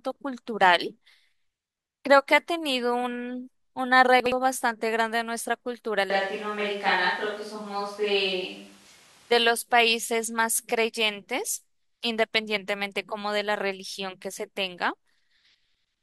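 At 4.2 s there's a brief chunks-out-of-order glitch, running to 4.32 s. A 60 ms piece of the speech lands one chunk late, after the piece meant to follow it. Nothing's missing, but the swap leaves three hard joins, so you get a quick jumbled stutter.

From 6.10 s to 9.32 s the speech goes suddenly roomy and hollow, with thinner bass and background noise sitting around 30 dB below the speech, then snaps back just as abruptly. Loudness barely changes. That's likely a switch to a distant microphone after the close mic dropped out.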